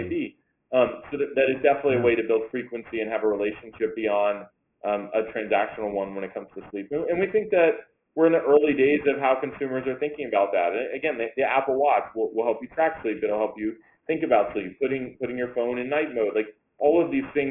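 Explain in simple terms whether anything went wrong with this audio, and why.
Aliasing throughout: the audio was converted to a lower sample rate without filtering first, so anything above 3 kHz folds back as gritty, wrong-pitched tones.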